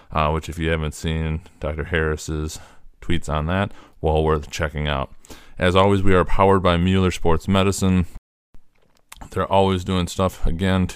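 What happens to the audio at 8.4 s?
At 8.4 s the speech is inside a rebuffering stall. It runs from 8.17 to 8.55 s. The player used up its downloaded audio and paused until more arrived. The sound drops to silence, then picks up exactly where it stopped. Nothing is lost, but about 0.37 s is added.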